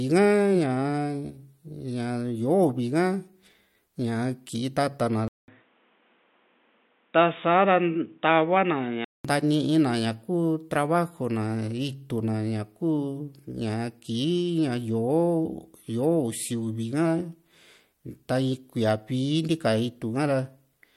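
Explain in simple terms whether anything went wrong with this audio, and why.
From 5.28 to 9.25 seconds the speech suddenly turns dull and boxy, then clears up again. Nothing above about 3.8 kHz gets through in that stretch. There is a short gap of silence, about a fifth of a second, at the switch. The speech also drops a little in loudness, and a new, quiet background noise appears. The likely cause is an input switched to a poorer device, such as another microphone or a headset's call mode, which passes a narrower range of sound.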